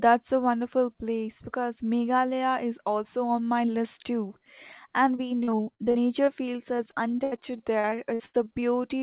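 Speech over a narrowband call path, with nothing above 4 kHz (consistent with G.711 at 64 kbps), is broken by repeated packet loss (robotic sound) from 5.16 to 6.29 s and again from 6.77 to 8.64 s. Short gaps, up to 42 ms in the first stretch and 83 ms in the second, are bridged by extending the preceding sound. That concealment covers about a fifth and a quarter of those stretches, leaving a choppy texture with pieces missing.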